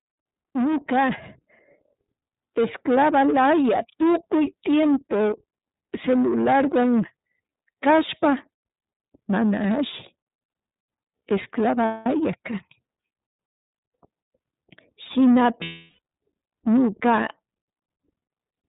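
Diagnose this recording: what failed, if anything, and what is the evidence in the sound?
The codec stage is at fault throughout. The speech is confined to narrowband, with nothing above 4 kHz, and carries a plainly audible rough, synthetic texture, consistent with iLBC in its 30 ms-frame, 13.33 kbps mode. A simple low-pass filter would only dull the sound, not coarsen it this way.

The network stage also failed, causing lost iLBC frames at 11.85 to 12.06 s (about 210 ms) and 15.62 to 15.99 s (about 360 ms). Each gap is filled by a held, buzzy vowel that fades, rather than by silence or a click as in a dropout or buffer underrun. The speech then recovers immediately because each frame decodes independently.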